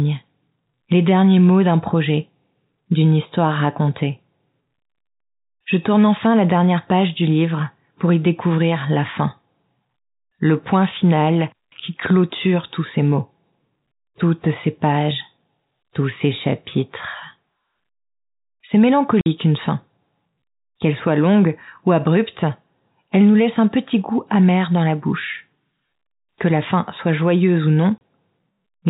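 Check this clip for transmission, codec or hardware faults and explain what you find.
Two brief dropouts are audible, both from packet loss filled with silence. At 19.21 s, just before "une fin", a 50 ms hole appears, and at 27.98 s, after "fin soit joyeuse ou", a 30 ms hole. Lost packets, which these lengths suggest were 10 ms each, were replaced with digital silence, so each gap starts and stops abruptly. The telephone-band G.711 sound itself carries through unchanged around these holes.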